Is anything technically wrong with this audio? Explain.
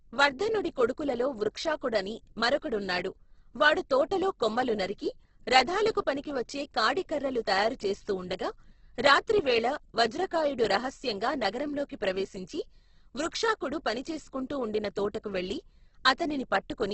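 Yes. Throughout the speech, likely Opus compression: nothing above 8.2 kHz, and bit-starved bands refilled with folded or noise content leave it grainy and rough, fitting a rate near 12 kbps.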